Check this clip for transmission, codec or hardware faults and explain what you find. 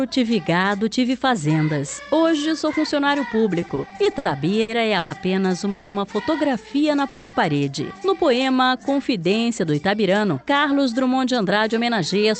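Four kinds of network-delay fault are audible, all from a call path whose audio is band-limited at about 8 kHz.

Repeated stalls (stutter), 3.61 to 5.13 s: the sound drags and hiccups through eleven short breaks, the longest 120 ms, with about 350 ms filled in total, roughly a quarter of that stretch. Packets kept arriving late, so the jitter buffer ran dry again and again. Each time, the receiver extended the last sound, fading it during the longer waits, then resumed without losing anything.

Call audio freeze, 5.70 to 5.97 s and 7.08 to 7.36 s: in each spot the sound hangs as a fading continuation of what came just before, lasting 240 ms and 250 ms respectively, never dropping to silence. Then it picks up exactly where it stopped, so nothing is lost and the rest arrives that much later. The likely cause is packets held up in transit, which emptied the jitter buffer while the receiver bridged the wait.

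Jitter buffer slow-down, 8.43 to 9.76 s: the audio runs at about 91% speed with unchanged pitch, sounding drawn out. The buffer was building a reserve, and it did this by repeating single pitch periods and small bits of pause many times over. This added 132 ms to the passage.

Jitter buffer speed-up, 11.37 to 12.24 s: the audio is hurried, at about 108% speed, while the pitch stays the same. The buffer was holding more than its target delay and trimmed it by cutting out short pieces of one or a few pitch periods in quick succession. About 70 ms was removed in all.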